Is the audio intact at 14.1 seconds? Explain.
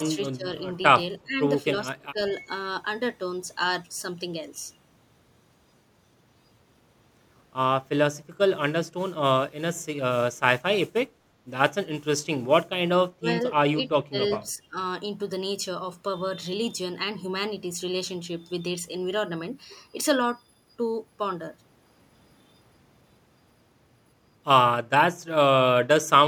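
No. From 14.03 to 14.17 s the speech dips by roughly 25 dB, a brief dropout that is likely speech suppressed in double talk by an echo canceller.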